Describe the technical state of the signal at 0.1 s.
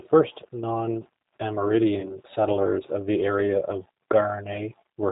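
At 0.1 s the speech has passed through a G.729 codec, and this holds for the whole clip. The codec rebuilds each 10 ms frame from a vocal tract model, pitch prediction and sparse pulses, and drops everything above 4 kHz, which fits an 8 kbit/s stream. The result is plainly audible: band-limited, rough, slightly synthetic speech.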